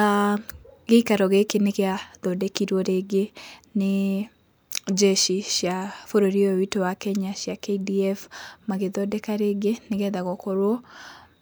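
No dropouts, glitches, clipping or other transport or processing faults are audible anywhere in the speech.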